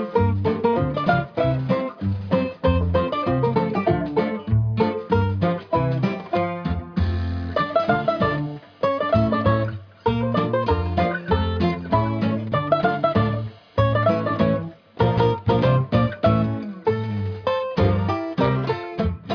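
No audible faults were found anywhere in the clip.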